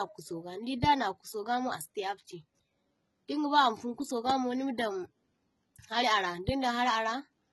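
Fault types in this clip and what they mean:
Transcoding between lossy codecs: The speech carries two layers of codec damage at once for the whole clip. There is a smeared, swirly quality like a very low-rate HE-AAC encode, with a second grainy coarseness over it that fits an MP3 at moderate rate. Nothing is present above 11.8 kHz, so the top end sounds dull. This likely comes from audio that was squeezed hard once and then re-encoded, with each stage adding its own artefacts.
Loud pop: Two sharp single pops sit on top of the speech, which carries on beneath them. The first runs from 4.30 to 4.32 s, just before "mo nima daŋ". The second runs from 6.49 to 6.51 s, right after "hari ara". Each is brief and peaks roughly 15 dB above the speech, so it jumps out clearly. The likely cause is a sudden voltage spike from a plug, switch, static or driver glitch entering the signal path.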